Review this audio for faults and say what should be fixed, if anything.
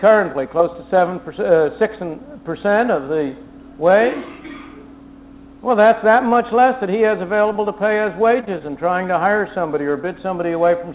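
A held stretch with a slight buzz or dip at 6.29–6.33 s and again at 8.41–8.45 s is a short stall from a late packet. The jitter buffer ran empty, so the receiver stretched the last sound by about 18 ms and 21 ms until the packet arrived, then resumed without losing anything.

Brief smears or wobbles at 7.53–7.57 s, 8.45–8.49 s and 8.59–8.62 s are short concealed packet loss. About 20 ms of audio missed the decoder each time, and the receiver covered the gap by extending the preceding sound before blending back into the real signal.

To prevent both, give the jitter buffer more headroom and add redundant packets (for example RED) on this G.711 path, which carries nothing above 4 kHz, so that late or lost frames can be recovered instead of concealed.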